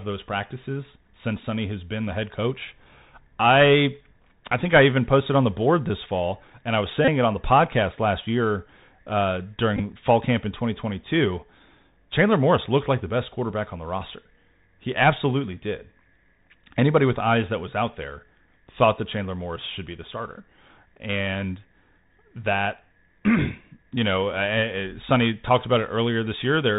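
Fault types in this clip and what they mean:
Bluetooth CVSD headset codec: one-bit adaptive delta coding at 64 kHz cuts everything above 4 kHz, leaving scratchy s sounds and granular hiss under the speech throughout.
Bluetooth headset packet repeated: lost packets replayed, giving a brief buzz near 267 Hz after "fall and I was" at 7.05 s and after "podcast last year uh" at 9.77 s.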